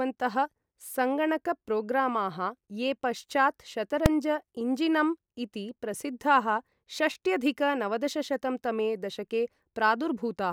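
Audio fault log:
4.06 s, invalid numbers at full scale: just after "ये पश्चात्" the speech is broken by a single hard bang. A calculation produced infinite or invalid values, which were forced to the largest value the format can hold, so the waveform jumps to one extreme value far beyond the speech peaks for one processing block of about 2.7 ms, which fits a 128-sample block. That is too short to hear a separate pop at each edge, so the jump to that extreme value and back merges into one sharp crack.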